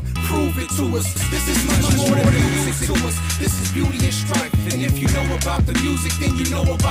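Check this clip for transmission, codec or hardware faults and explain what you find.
There's one fault: a doubled audio track from 1.16 to 2.96 s, where an equally loud copy trails around 150 ms behind, likely from a second, slower capture path.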